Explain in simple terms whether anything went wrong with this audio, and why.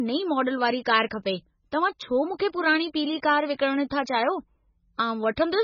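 Heavy MP3 compression, likely, squeezed this speech into far too few bits for the whole clip. To save space, the encoder discarded everything above 6.9 kHz and dropped quieter detail, so the speech sounds dull, muffled and somewhat watery from start to finish.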